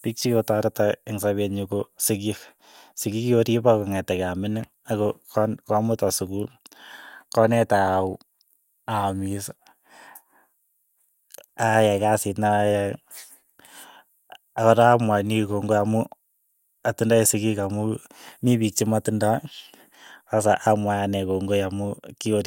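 No technical faults can be heard in this recording.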